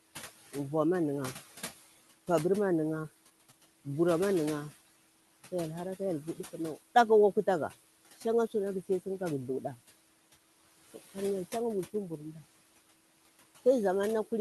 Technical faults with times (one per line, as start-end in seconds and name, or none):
0.00-14.41 noise suppressor artifacts
3.01-3.55 short concealed packet loss